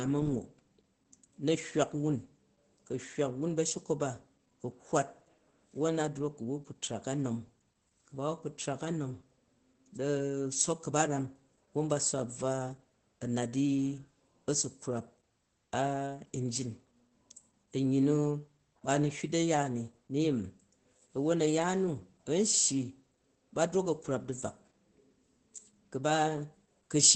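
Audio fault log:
Throughout: Opus voice compression. The speech is band-limited, with nothing above about 8.7 kHz, so it sounds muffled. At a bitrate that fits roughly 12 kbps, the SILK coder quantises the excitation coarsely. That leaves a plainly audible hoarse, slightly robotic edge.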